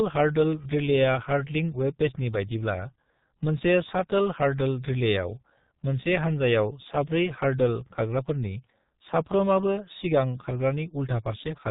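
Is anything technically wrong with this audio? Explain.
Yes, the speech has passed through a very low-rate telephony codec. G.723.1 codec damage runs throughout the clip and is heavy. The codec rebuilds speech from a coarse model refreshed only once per 30 ms frame and discards everything above 4 kHz. The density sounds like about 6.3 kbit/s. The result is a muffled, hoarse voice whose consonants smear together, with the crisp edges of sibilants and plosives lost across the whole recording.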